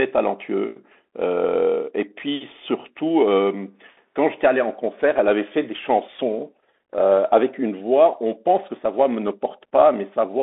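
A speech clip carrying Bluetooth CVSD headset codec damage throughout. The band runs from about 250 Hz to 3.6 kHz, fitting a 64 kbps CVSD link. Granular hiss and scratchy s sounds are plainly audible.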